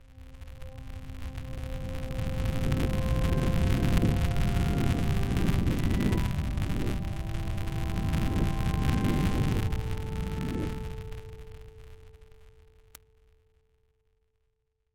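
Filter restarted on every block, throughout: each block starts from cleared filter state, leaving a small transient that builds a 200 Hz buzz tracking the sound's level.

Word clock ticks, from 0.35 s to 14.67 s: an unlocked receiving clock slips against the sender's roughly every 0.3 s, dropping or repeating one sample, which gives about fifty sharp, uneven ticks and points to an error of around 70 ppm.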